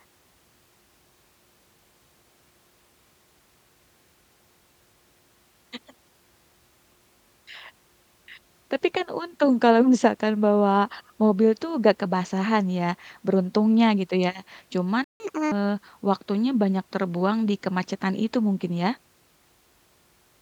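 At 15.04 s the speech cuts out abruptly and the output sits in silence for about 158 ms, until 15.2 s, before resuming where it left off. This playback stall is likely the player running dry of buffered data or having its output thread briefly blocked.

From 15.2 to 15.52 s the speech rushes forward at 1.5 times normal speed, sounding chipmunk-like and raised in pitch by roughly seven semitones. This is catch-up at higher speed: the player resamples its backlog faster to recover the lost time, then returns to normal rate.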